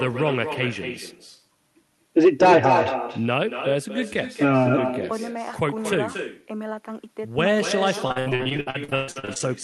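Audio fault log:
Throughout: echo with no canceller. Every stretch of speech is followed by a second, weaker copy arriving roughly a fifth of a second later at about 7 dB below the direct sound. The far end's loudspeaker was picked up by its own microphone and returned unremoved, so the copy sounds thinner. On a waveform, each burst of energy has a smaller ghost trailing it. On a spectrogram, every syllable's pattern repeats faintly, shifted right by that fixed delay.
8.07 to 9.49 s: repeated packet loss (robotic sound). Across this span the signal drops out again and again, with about 18 separate holes. The longest lasts about 122 ms, and roughly half the stretch is synthetic fill. Each gap is patched by extending the preceding sound, so the audio turns choppy, with pieces missing. On a spectrogram, smeared, flat-toned patches alternate with brief real segments and missing fragments. The waveform shows uneven, repetitive chunks. 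The Opus path's cut-off near 12 kHz stays visible throughout.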